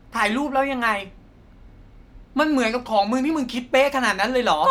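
Nothing in this speech recording stands out as a technical fault, so there's nothing here to flag.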